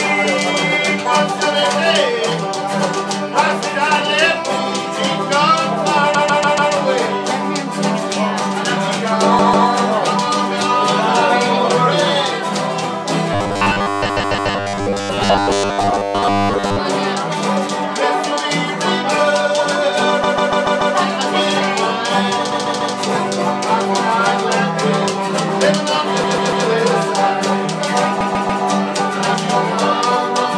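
A stuttering jump-back at 6.15 s, where a 144 ms stretch plays five times over, and again at 9.39 s, where it plays three times: these are repeated frames, a block of compressed audio delivered more than once, so the decoder replays it and adds time. From 13.33 to 16.79 s the sound turns rigid and metallic under a fixed 100 Hz buzz, robotic sound from repeated short buffers. Starved of new input, the playback likely looped its last 10 ms while most of the real audio was skipped. Inside that stretch, at 14.09 s, another repeated-frames stutter replays its 144 ms block four times. The same stutter recurs at 20.23 s (six plays), then 22.51, 26.23 and 28.20 s (four plays each), each adding its repeats to the running length.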